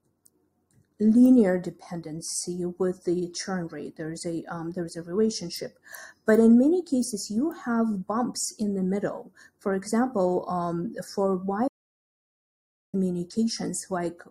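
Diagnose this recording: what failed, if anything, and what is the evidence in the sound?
The failure is an audio dropout to silence, at the input stage. At 11.68 s the sound stops abruptly, mid-flow. The gap runs to 12.94 s, about 1.25 s. It is silent, with no room tone or noise floor underneath. The sound then resumes just as suddenly. The likely cause is a brief loss of the input signal, from a device disconnect or link failure. The recorder kept writing silence, so that stretch of audio is gone.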